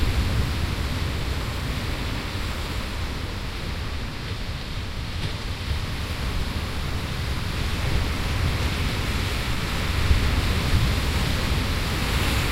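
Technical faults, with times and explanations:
No technical faults can be heard in this recording of sounds. Nothing in it calls for a time or an explanation.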